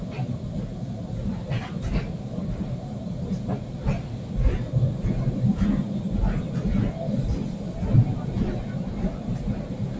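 Right through the clip, a speech noise suppressor was left on: it treats sustained sounds and tails as noise, ducking them a few decibels, so everything pumps and thins.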